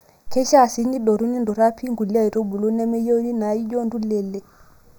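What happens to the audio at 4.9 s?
At 4.9 s the speech still carries the channel delay (comb filtering) heard across the entire clip, so this moment is no different from the rest. One channel arrives late by a fraction of a millisecond, only a few samples. When the two are summed to mono, content common to both cancels at evenly spaced frequencies, with the first deep notch around 3 kHz and further notches at odd multiples above it. The result is a hollow, phasey tone.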